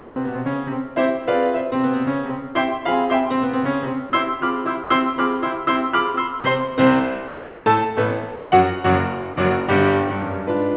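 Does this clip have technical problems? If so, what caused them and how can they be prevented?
Yes. There are two kinds of fault.

Comfort noise in place of the background appears at 0.0–0.16 s and 8.36–8.52 s. The real background gives way to a steady, featureless hiss. It is about 2 dB quieter in the first stretch and about 1 dB louder in the second. The likely cause is discontinuous transmission, where the receiver synthesises noise during apparent pauses. Turning off discontinuous transmission for music prevents this.

Sound dropped by the voice detector occurs at 4.1 s, 4.84–4.9 s, 6.4–6.44 s, 7.28–7.66 s and 9.34 s. The music briefly turns into flat noise, then returns. At 7.28 s about 170 ms of music vanishes. A detector tuned for speech likely mistook the music for background. Disabling voice activity detection on music streams prevents this.

Both faults sit on a narrowband call path that leaves nothing above 4 kHz, which fits G.711 A-law.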